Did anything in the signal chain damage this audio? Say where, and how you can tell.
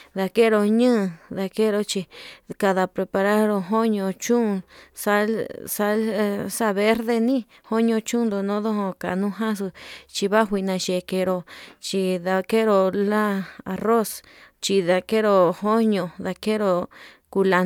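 No, nothing in the signal chain damaged this audio.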